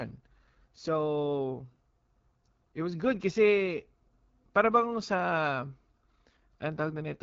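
Speech runs through the AMR wideband (HD Voice) codec from start to finish, and the damage is plainly audible: the voice has a rough, raspy texture, which fits one of the lowest rates, around 8.85 kbit/s. Nothing reaches above about 7.5 kHz. Unlike narrowband AMR, which stops near 3.4 kHz, the sound keeps upper presence, but its top band sounds like hiss rather than real detail, because noise fills that region.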